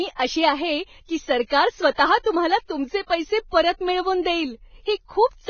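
Throughout the speech, the sound is hissy and grainy, with roughened tones, blurred attacks and nothing above 6.5 kHz. The likely cause is heavy Vorbis compression. The damage points to a bitrate around 17 kbps, which forces that low cut-off and turns fine detail into noise.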